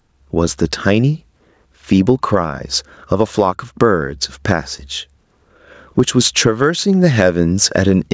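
Gain pumping runs through the whole clip, with the gain swinging roughly 15 dB. The likely cause is microphone gain set far too high, with a fast limiter clamping each peak. The speech sounds squashed.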